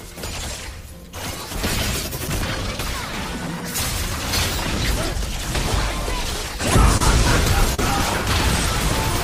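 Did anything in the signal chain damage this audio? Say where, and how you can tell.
Yes. The damage happened on the network path, as short concealed packet loss. At 6.97 to 7.01 s about 30 ms of audio failed to arrive, and at 7.74 to 7.79 s about 40 ms went missing. Each gap sounds like a brief smear or wobble rather than silence. The receiver's decoder covered the holes by extending the preceding sound, following its pitch where it was voiced and using shaped noise where it was not. It then crossfaded back into the real audio.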